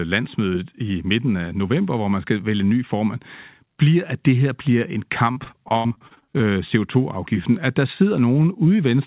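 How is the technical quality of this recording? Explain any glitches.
The recording has one real glitch. It sits in a call-quality narrowband channel with nothing above 4 kHz, which fits G.711 A-law at 64 kbps. Right after "det her bliver en", from 5.32 to 6.46 s, there's repeated packet loss with a robotic sound. Packets keep going missing. Each gap, the longest about 80 ms, gets patched by stretching the previous sound, so roughly a third of that stretch is filler. That leaves the speech choppy and broken up.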